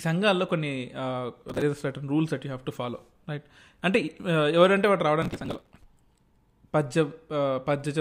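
Processor overload crackle at 1.49 to 1.62 s and again at 5.22 to 5.84 s: the processor falls behind on short buffers, around 5 ms each, and dozens are skipped, leaving hard-edged gaps that sound like gritty tearing over the speech.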